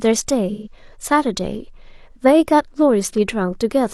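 AAC frame loss with concealment occurs from 0.52 to 0.72 s in this speech clip. About 128 ms of coded audio never reached the decoder, which fits a run of three frames. The decoder filled the gap by reusing the last good spectrum, scrambling its signs and smoothing its energy, rather than leaving a hole. The result is a brief smeared, noisy or phasey patch where the speech loses its definition before clean decoding resumes.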